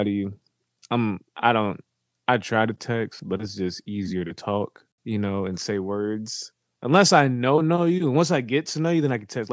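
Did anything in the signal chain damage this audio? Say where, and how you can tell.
No, nothing in the chain damaged this speech; it has simply been through a call's microphone processing, which trims the lowest bass and leaves nothing above 8 kHz, and that is normal for a call path.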